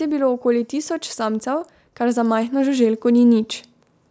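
The call's automatic gain control judged the input too quiet and raised its gain steadily by about 6 dB from 0.42 s to 3.52 s, so in this speech recording the voice and background swell together, with the high-pass-filtered call microphone path carrying nothing above 8 kHz.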